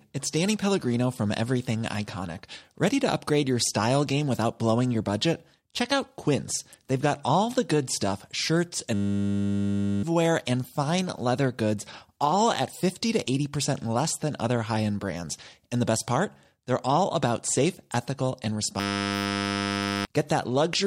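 At 8.94 to 10.03 s and 18.8 to 20.05 s, a system hang loop replays one 10 ms slice. The result is a steady 100 Hz buzz replacing roughly one to one and a half seconds of speech.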